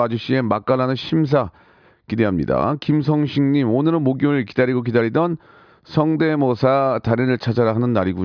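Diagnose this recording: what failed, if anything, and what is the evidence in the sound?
Nothing failed; no faults heard.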